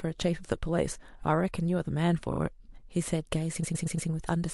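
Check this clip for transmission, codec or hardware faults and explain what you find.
One transmission fault is present. From 3.63 to 4.09 s there are repeated frames: a 116 ms block of compressed frames is played four extra times, so the decoder loops the same fragment. It sounds like a rapid stutter, and it lengthens the speech by about 0.46 s.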